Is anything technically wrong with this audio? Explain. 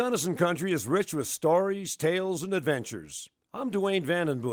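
No, nothing technically wrong can be heard here.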